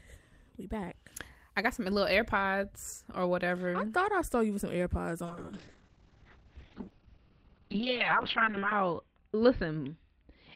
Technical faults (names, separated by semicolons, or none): call bitrate drop